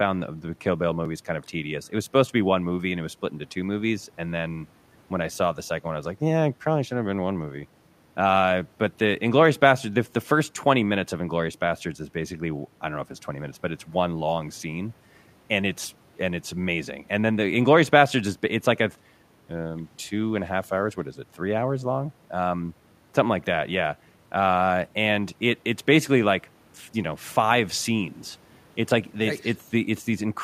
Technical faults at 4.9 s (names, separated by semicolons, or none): none